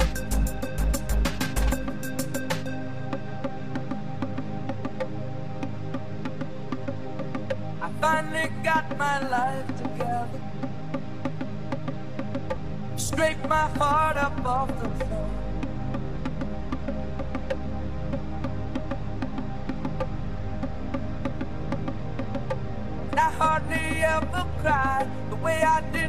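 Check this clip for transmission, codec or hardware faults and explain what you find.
One transmission fault turns up: lost LE Audio frames at 16.87 s. About 7.5 ms of audio went missing, which fits a single LC3 frame. The decoder filled the gap by repeating the last spectrum with randomised signs, so a brief noisy smear replaces the sound. Unlike a hard dropout, it doesn't fall to silence.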